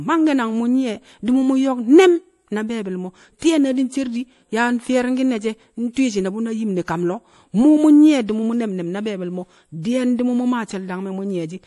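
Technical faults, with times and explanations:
Throughout, MP3 compression: the speech sounds watery and swirly with nothing above 11.5 kHz, likely from heavy MP3 encoding, fitting a bitrate near 48 kbps.
3.39–3.42 s and 5.93–5.97 s, pre-echo: a brief hiss of about 33 ms leads sharp attacks, after "ne̱m na be̱e̱bi̱l mo̱" and before "shi̱ne̱ bu̱ na yim", as block noise spills ahead.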